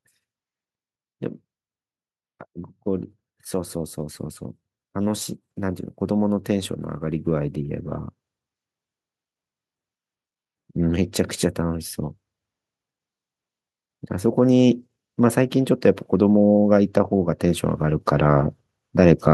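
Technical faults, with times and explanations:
4.92–7.85 s: automatic gain rising. The gain control judged the input too quiet and raised its gain by about 4 dB over roughly three seconds, so the speech and the background noise swell upward together rather than the talker getting louder.
15.52–19.26 s: automatic gain rising again, this time by about 5 dB across nearly four seconds. The slow, even lift of the noise floor alongside the speech shows it comes from the gain stage, not the source.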